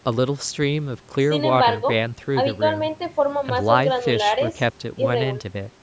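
Speech with no technical faults.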